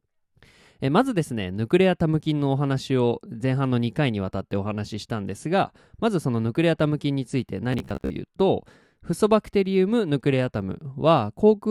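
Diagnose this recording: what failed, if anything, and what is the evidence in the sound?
From 7.73 to 8.1 s, robotic sound from repeated short buffers turns the speech into a rigid 66.8 Hz buzz. This is likely a driver or buffer underrun that replays a 15 ms slice while about half the audio is skipped. A spectrogram shows fixed harmonic lines, and the waveform shows identical repeating cycles.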